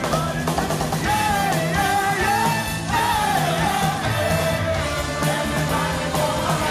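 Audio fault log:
No technical faults can be heard anywhere in the signal, with no breaks or damage at any point.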